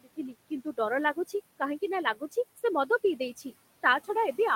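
Throughout the clip, a noise suppressor pulls the room noise, which sits about 19 dB under the speech, down by about 19 dB frame by frame. The noise artifacts show as a background that drops away in the gaps and swells back beneath the voice.

From 0.0 to 0.79 s, and again from 2.04 to 2.36 s, the suppressor mistakes parts of the speech for noise and cuts them with it, by up to about 22 dB and then about 15 dB. Roughly a third of a second in the first stretch and a tenth in the second sounds swallowed and faint.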